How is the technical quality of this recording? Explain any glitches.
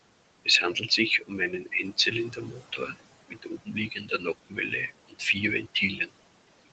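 The quality is let down by heavy noise suppression, which both colours the whole take and eats into the speech in a few places.

Noise suppressor artifacts run through the entire clip. The room noise sits about 13 dB under the speech, and the suppressor pulls it down by about 21 dB, deciding frame by frame which bands count as noise. That leaves the background pumping, dropping away in gaps and surging back under speech.

Speech cut by the noise suppressor shows up four times. From 1.2 to 1.73 s, roughly a fifth of a second is pushed down by up to about 18 dB. From 2.31 to 2.94 s, around 400 ms dips by up to about 11 dB. The worst stretch is 3.28 to 4.72 s, where about a second is cut by up to about 21 dB. A brief bit around 5.08 to 5.36 s loses up to about 18 dB. The suppressor misread quieter speech as noise there, so those parts sound swallowed and faint.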